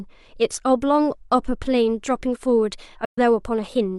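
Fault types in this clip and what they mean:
AAC frame loss with muting: from 3.05 to 3.18 s the speech drops into a soft-edged silence lasting about 128 ms, which fits roughly three lost AAC frames. Instead of guessing at the missing data, the decoder zeroed the spectrum for those frames. The overlapping transform windows on either side blend the surviving audio into that emptiness, so the speech fades out and back in over about a frame's length rather than switching off abruptly.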